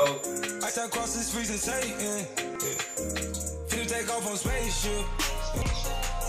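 At 2.55 s the sound jumps abruptly, as roughly 150 ms of audio is missing and the material on either side is butted together with no gap of silence. At 5.62 s the same happens again, losing about 100 ms. The likely cause is a dropped buffer (overrun): the capture program fell behind and the hardware overwrote blocks before they were read, so the audio skips forward.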